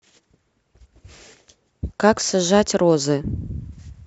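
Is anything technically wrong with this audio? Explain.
Yes. From 0.77 to 1.03 s the speech is overlaid with DAB burbling, short blips of noise in single sub-bands. Bit errors slip past error correction into the MP2 audio data, so wrong samples put noise into individual sub-bands.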